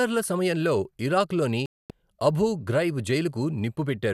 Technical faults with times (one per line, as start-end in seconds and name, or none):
1.66-1.91 digital broadcast dropout